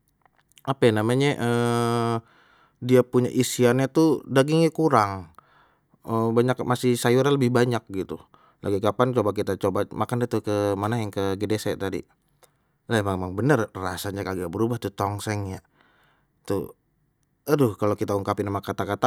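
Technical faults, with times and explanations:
No technical faults are audible anywhere in the speech recording.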